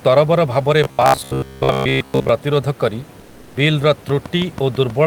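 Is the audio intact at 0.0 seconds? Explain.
Yes, the audio is intact at 0.0 seconds, with only the room's own background noise, about 27 dB below the speech, present as part of the recording.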